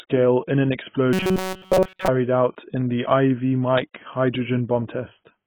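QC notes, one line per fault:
Throughout: AAC compression, likely at a low bitrate around 16 kbps, lowers the cut-off and quantises coarsely, leaving speech dull, smeared and fizzy on sibilants.
1.13–2.08 s: robotic sound from repeated short buffers. Audio likely arrived too seldom, so a roughly 5.3 ms chunk looped continuously, forcing a rigid 188 Hz metallic buzz between "in an" and "out in the".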